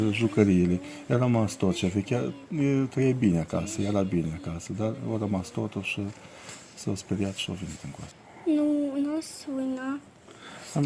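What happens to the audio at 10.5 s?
Nothing goes wrong at 10.5 s; the audio carries on intact there with no audible fault.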